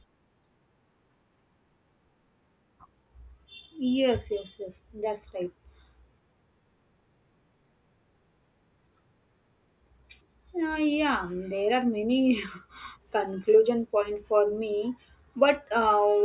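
A speech recording in which no technical fault can be heard at any point. There is nothing here that needs a time or a cause.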